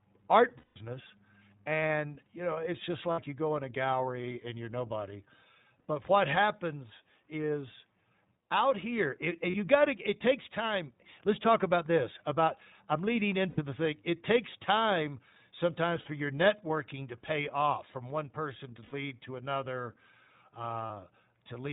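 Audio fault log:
throughout  iLBC codec: the speech is band-limited, with nothing above 4 kHz, and it sounds clear but slightly rough and synthetic. The damage is plainly audible. The codec models each 20 ms frame's excitation independently at 15.2 kbps and rebuilds the voice from that coarse description. Fine texture is lost, and the missing upper band makes the speech sound like a phone call.
0.58–0.78 s, 3.12–3.20 s, 9.50–9.56 s, 13.50–13.60 s, 16.00–16.08 s, 18.84–18.94 s, 20.86–20.91 s  lost iLBC frames: each gap is filled by a held, faintly buzzy or breathy vowel-like tone. The longest gap, about 180 ms, comes at the start, and another falls between "out here it" and "you got". Other examples sit between "takes time sometimes" and "your networking to pay", and between "from one person to" and "to another". Each time the decoder replays the last pitch cycle mixed with noise. Because every frame decodes independently, the voice recovers almost at once.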